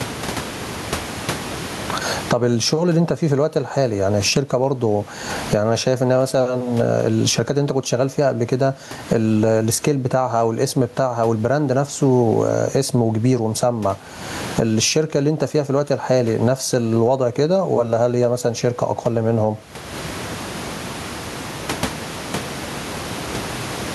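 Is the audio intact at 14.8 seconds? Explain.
No. Gain pumping runs through the whole clip, including 14.8 s: loud and soft parts end up closer in level and the sound is squashed, swinging around 25 dB, likely from excessive gain hitting a fast limiter.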